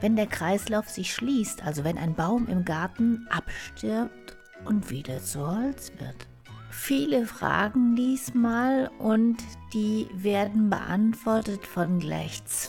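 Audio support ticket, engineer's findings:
Time-stretched section, 3.47 s to end. Pace drops abruptly to about 0.63x while pitch holds. Likely cause: time-stretch processing in the editing or playout software, lengthening the material to fit a slot. Stretch repeats short slices to fill time without resampling. Pitch survives.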